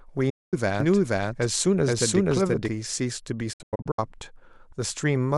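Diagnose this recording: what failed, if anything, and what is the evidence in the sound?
A digital broadcast dropout struck twice at the receiver, where corrupted or missing frames were muted until clean ones returned. From 0.30 to 0.54 s the speech cuts to silence behind a fast fade of about 8 ms, losing around 224 ms, which fits a run of several frames of roughly 32 ms each. From 3.53 to 3.99 s the muting is broken into short holes spread over 448 ms, the longest 96 ms, totalling 288 ms. Whatever was broadcast in those gaps is gone.

A doubled audio track runs from 0.80 to 2.68 s. The likely cause is the speech being captured a second time through a slower path, or an edit that left two copies out of step. A full-band copy trails the original by about half a second at roughly equal level. It has no reverberant tail or room colouring, so it cannot be an acoustic echo. It starts and stops abruptly at those two times.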